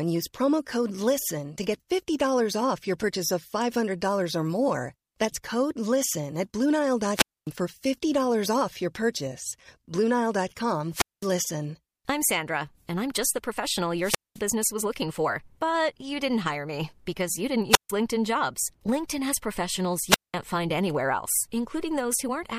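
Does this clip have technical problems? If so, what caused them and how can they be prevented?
Yes. The speech has five wireless microphone squelch dropouts, at 7.14–7.49, 10.91–11.30, 14.00–14.42 (just before "was looking for"), 17.70–17.90 (after "me because you didn't"), and 20.08–20.34 (between "has professionals" and "find anywhere else"). Each time, the FM radio signal weakened enough for the receiver's squelch to mute the output for about 150–250 ms. A spectrogram would show a brief band of broadband hiss and then a blank gap across all frequencies, and the waveform would drop to a flat line before the speech resumes. To prevent it, keep line of sight between transmitter and receiver, position or use diversity antennas properly, and choose a clear frequency with fresh batteries.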